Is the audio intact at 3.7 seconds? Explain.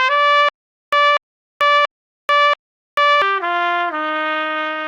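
No, a call bitrate drop from 3.5 s to the end cuts coding from 64 to 22 kbps, making the sound coarse and muffled; the spectrogram loses its upper band.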